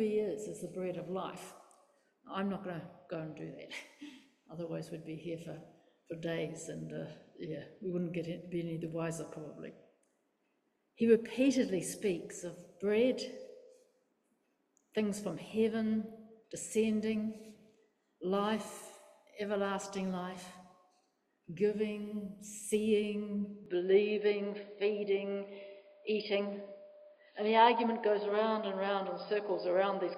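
At 23.66 s the input likely switched to a poorer device, one passing nothing above 5 kHz. From there to the end the sound turns dull and boxy with no gap at the change, the level stays about the same, and a faint new noise floor appears, roughly 50 dB down.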